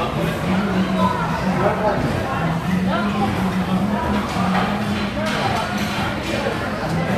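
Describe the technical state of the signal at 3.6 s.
At 3.6 s the everyday sound runs intact, with no audible fault at that moment.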